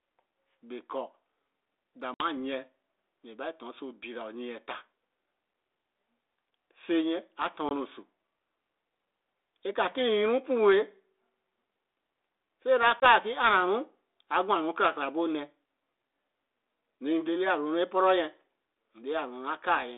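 Speech with packet loss on an ADPCM call at 2.14 s (about 60 ms gone), 7.69 s and 13.0 s (20 ms each). Unlike a plain dropout, each silent gap is followed by slightly distorted speech that settles within tens of milliseconds, as the decoder's predictor resynchronises.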